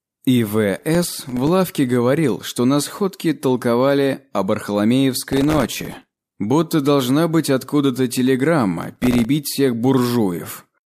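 The processor fell behind its audio deadlines three times, at 0.78 to 1.49 s, 5.32 to 6.39 s and 8.83 to 9.25 s. Each missed buffer dropped out to silence with hard edges, and the gaps come so close together that they fuse into processor overload crackle, a gritty tearing over the sound. The density fits very short buffers of around a millisecond and a half. The middle burst is longest and roughest, suggesting around a hundred misses.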